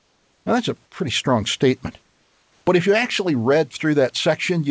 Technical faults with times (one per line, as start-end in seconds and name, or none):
0.00-0.46 comfort noise in place of the background
2.02-2.66 comfort noise in place of the background